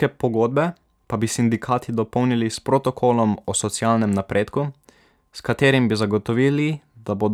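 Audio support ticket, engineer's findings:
Engineer's findings: no audible fault found anywhere in the speech clip.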